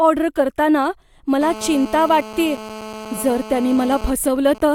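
From 1.41 s to 4.06 s a GSM phone buzz sits under the speech at about 15 dB below it: a hard, raspy 217 Hz buzz rich in harmonics, nearly steady. The audio circuit is rectifying a nearby 2G phone's transmit bursts during a call.

At 4.07 s the buzz gives way to GSM signalling bursts, continuing until 4.61 s at a similar level. These are even ticks with a longer 217 Hz buzz twice a second. This fits the same phone sending only intermittent burst groups while its user is silent in the call.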